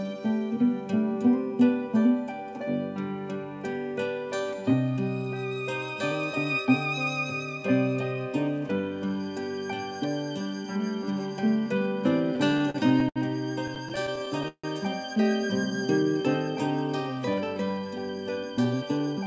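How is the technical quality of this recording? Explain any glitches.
The recording has audible timing faults in its last third. It was carried over a call link whose sound stops at 8 kHz, which fits a G.722 codec at 64 kbps.

Repeated stalls (stutter) occur from 12.36 to 13.18 s and from 13.68 to 14.66 s. Packets arrived late, so the jitter buffer kept running dry. The receiver stretched the last sound to bridge each wait. The sound drags and stutters, with the longest hold near 155 ms.

A jitter buffer slow-down runs from 15.64 to 16.19 s. The receiver repeated tiny pitch cycles to rebuild its reserve, adding 69 ms. Playback drops to 89% speed at unchanged pitch. Sounds there seem drawn out.

A jitter buffer speed-up runs from 18.18 to 19.21 s. Too much audio had piled up, so the receiver cut short slices to reduce delay. About a tenth of a second disappears. The sound plays at 110% speed and feels hurried.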